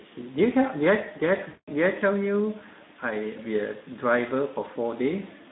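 Throughout, the Speex codec runs at a low setting, which fits about 11 kbps. Starved of excitation bits, the speech sounds plainly hoarse and noisy within a 150 Hz to 3.7 kHz band. From 1.47 to 1.69 s, roughly 200 ms of packets were lost. VoIP packet loss concealment by the speech codec extrapolates the last pitch and filter, stretching the sound into a fading, buzzy tone or coloured noise.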